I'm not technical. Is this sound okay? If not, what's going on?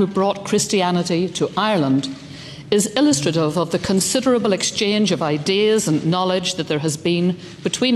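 No. At 3.85 to 3.87 s there is a loud pop, a single sharp click louder than the surrounding sound, likely from a plug, switch or static discharge.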